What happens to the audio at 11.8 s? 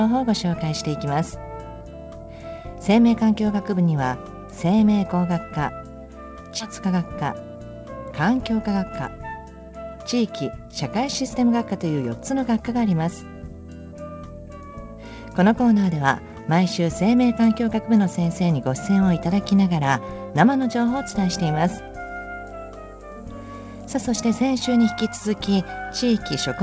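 Nothing goes wrong at 11.8 s; the audio passes through intact there, carried as usual by the call path, whose codec leaves nothing above 8 kHz.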